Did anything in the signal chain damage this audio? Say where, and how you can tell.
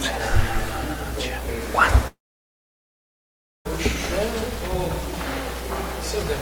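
Yes. The damage is most likely in the network stage, a long network dropout where the packet stream stopped arriving from 2.07 s to 3.67 s. At 2.07 s the last sound is stretched into a brief fading buzz, then about 1.5 s of near-silence follows until the audio resumes at 3.67 s. That pattern is a receiver concealing a gap it cannot fill, and the roughly 1.6 s of original audio lost in that window is never recovered.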